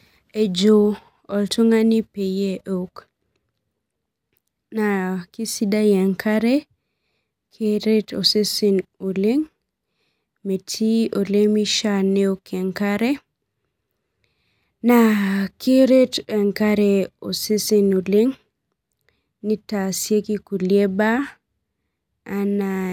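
No technical faults can be heard anywhere in the recording. The speech runs without any audible interruption or damage.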